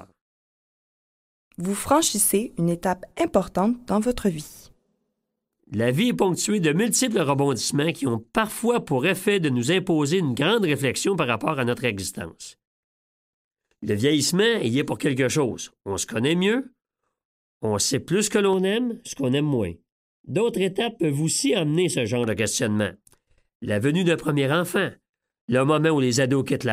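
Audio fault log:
18.53–22.24 s, channel delay (comb filtering): one channel arrives late by roughly 0.4 ms and the pair is summed to mono, so shared content cancels at evenly spaced frequencies starting near 1.5 kHz, leaving the sound hollow and phasey over this stretch.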